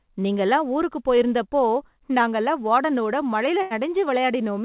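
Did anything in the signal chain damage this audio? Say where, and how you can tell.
Yes. At the network stage, a burst of packet loss at 3.62 to 3.73 s was concealed by stretching and fading the last sound, then speech resumed with 90 ms gone.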